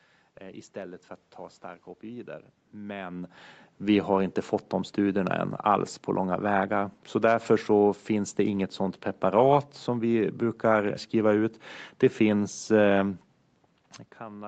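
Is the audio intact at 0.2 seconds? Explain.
Yes, the audio is intact at 0.2 seconds, with no fault at that moment.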